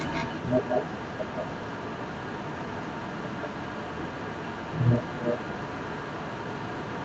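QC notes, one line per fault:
Throughout, echo leak: a second copy of the speech follows the original 186 ms later at roughly equal loudness, likely residue that a far-end echo canceller let through. Unlike room reverberation, it is a distinct repeat rather than a smooth, decaying tail.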